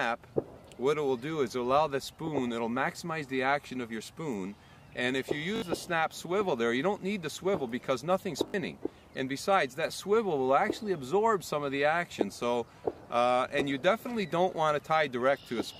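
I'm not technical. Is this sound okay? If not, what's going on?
No. There are two short glitches, at 5.56 s and 8.48 s. Each one is a repeated buffer. The playback device didn't get fresh audio in time, so it replayed the last tiny piece it had, several times in a row. Each stutter lasts about 0.06 s and sounds like a brief buzz with hard joins. The size fits a 20 ms buffer. A little under a tenth of a second of real sound goes missing each time.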